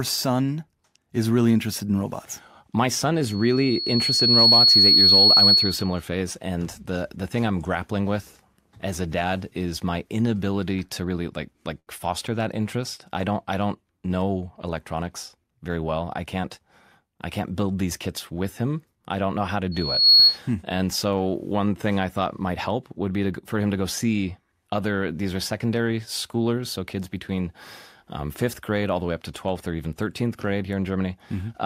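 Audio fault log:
3.22–6.01 s and 19.71–20.39 s, loudspeaker feedback squeal: A pure tone at 4.4 kHz rises out of the speech twice. The first swells over roughly a second and a half to about 10 dB above the speech and stops just before "phase and the the". The second, right after "don't know how to", builds in under half a second and reaches about 15 dB above. Each time a microphone is hearing its own loudspeaker, and at that frequency the loop gain passes one, so the tone keeps reinforcing itself until the loop is broken.
11.79–11.89 s, short stall from a late packet: Between "to really like like" and "foster that interest I", the sound hangs for 76 ms instead of moving on. A packet arrived late, the jitter buffer ran dry, and the receiver stretched the last bit of audio to fill the gap. It then carried on from the same place, so nothing is lost. The result is a brief held sound, and playback now runs 76 ms later than before.
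14.92–15.77 s, jitter buffer speed-up: For under a second the speech runs at 108% speed with its pitch unchanged, which sounds hurried. The buffer was holding more audio than its target, as happens when delayed packets arrive together. To bring latency back down, the receiver cut short pitch-period-sized slices many times in a row, removing around 70 ms in total.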